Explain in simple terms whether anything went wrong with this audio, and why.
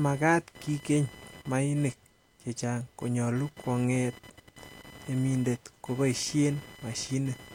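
Yes, something went wrong: computer activity noise runs through the whole clip, a high buzzy whine pulsing about a thousand times a second beneath the speech. The computer's own electrical activity leaked into the audio circuit. Unlike mains hum, it's higher and scratchier, not a low steady drone.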